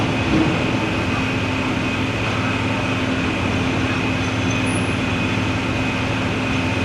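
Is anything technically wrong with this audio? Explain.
No, there's no technical fault to report in this audio.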